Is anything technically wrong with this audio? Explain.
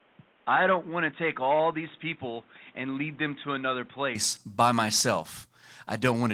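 Yes. From the start to 4.15 s the speech is boxy and dull, with nothing above 3.8 kHz, somewhat quieter, and carrying faint added noise well below the voice. Then it clears abruptly with no gap. This is likely an input switched to a poorer device. A narrower-band microphone path brings its own level and noise floor, unlike codec band-narrowing, which would not add a new noise floor.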